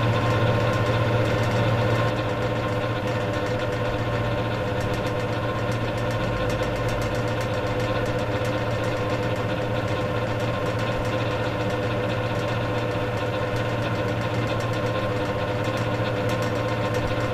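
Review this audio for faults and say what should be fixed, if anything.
From the start of the clip until 2.1 s there is a doubled audio track: every sound is followed by a second, full-band copy roughly 0.7 s later at about the same level. The repeat has no decay or room colouring, and it stops abruptly at 2.1 s. The likely cause is the same source reaching the mix twice, through a second, slower capture path or an edit that left two copies out of alignment.

To prevent it, route each source into the mix only once and check edits for overlapping duplicate regions before export.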